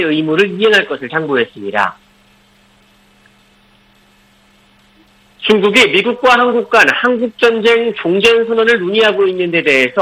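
Hard clipping appears four times, each where the signal drove past what a stage could pass: 0.39 to 0.79 s (about 6 dB over), briefly at 1.78 to 1.84 s (about 2 dB), longest and hardest from 5.5 to 7.06 s (about 8 dB), and 9.68 s to the end (about 4 dB). Peaks are sliced flat, giving harsh crackling fuzz on loud sound. The waveform shows squared-off tops, and a spectrogram shows broadband harmonic smear extending high up.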